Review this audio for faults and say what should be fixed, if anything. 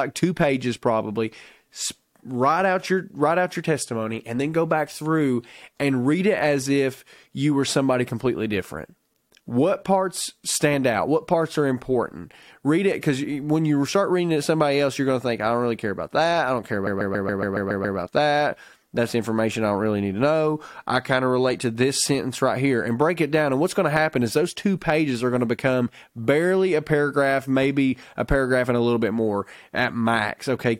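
Repeated frames occur in this speech clip from 16.86 to 17.97 s, just after "that i don't care" and before "that that's information i". A block of 139.3 ms plays over again eight extra times, heard as a rapid stutter. The block length fits a run of about six compressed frames being written or sent more than once. The decoder simply played them again. This adds about 1.11 s to the audio. To prevent it, check frame sequence numbers or timestamps at write and receive time, and drop any frame already delivered.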